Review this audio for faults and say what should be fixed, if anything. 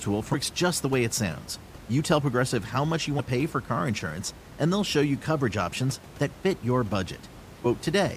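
Damaged data in the compressed stream causes two brief blips, at 3.18 s and 7.64 s. The first falls between "how much you" and "pay for car insurance". Corrupted bytes there make the decoder lose frame sync. It then skips ahead to the next frame header.

Protect the stream with checksums and error correction, and keep metadata such as stream titles out of the audio frames.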